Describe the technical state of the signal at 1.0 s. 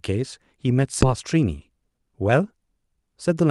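A skip ahead at 1.01 to 1.03 s: roughly 0.4 s of audio was dropped, in transit or by an overflowing jitter buffer, so playback jumps straight forward with no gap.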